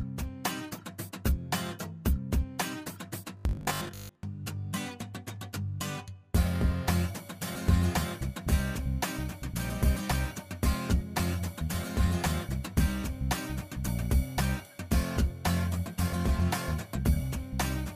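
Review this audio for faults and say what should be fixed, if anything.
From 3.37 to 4.23 s the sound becomes a rigid, metallic 50 Hz buzz, a robotic sound from repeated short buffers. Most of the segment is likely repeated 20 ms chunks filling gaps where fresh audio arrived too slowly. To prevent this, enlarge the playback buffer or fix the upstream delivery timing.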